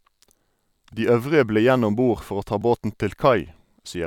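Two quick repeated-buffer glitches at 0.92 s and 2.62 s: audio arrived late, so a tiny chunk, roughly 1.3 ms, looped, giving short buzzy clicks.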